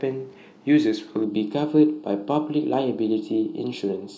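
From 1.24 s to the end, channel delay (comb filtering) makes the speech hollow and phasey: one channel lags a fraction of a millisecond, notching from around 2 kHz upward.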